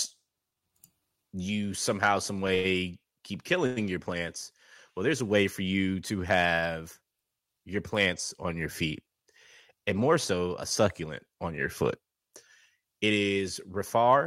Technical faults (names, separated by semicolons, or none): short stall from a late packet; call audio freeze